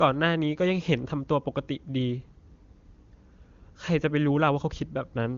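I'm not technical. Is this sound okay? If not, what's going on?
Yes, no faults heard.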